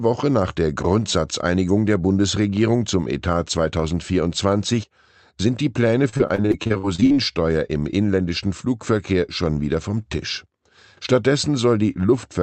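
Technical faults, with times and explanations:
6.09–7.12 s, repeated packet loss (robotic sound): more than a dozen short holes, the longest about 53 ms, are each patched by extending the preceding sound. About a third of this stretch before "im inländischen" turns choppy instead of briefly going silent, as a single dropout would.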